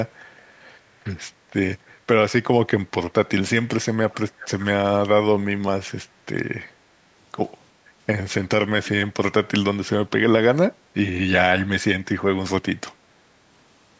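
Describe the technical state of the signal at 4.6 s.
At 4.6 s an echo leak is audible, running from 4.1 to 4.66 s. A faint copy of the speech returns about 372 ms late, likely from a loudspeaker echo the far end failed to cancel.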